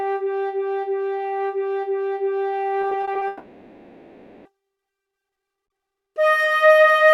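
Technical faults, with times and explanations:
2.81–3.23 s, repeated packet loss (robotic sound): a run of short holes, none longer than 20 ms, is each patched by stretching the preceding sound, so 120 ms of the 0.42 s span (roughly 29%) is filler. That gives a choppy stutter.
3.27–4.47 s, long network dropout: for 1.18 s the original sound is gone, replaced entirely by a drawn-out continuation of what came just before, never falling to silence, before normal audio resumes. This is likely a network outage masked by concealment, with the lost stretch never recovered.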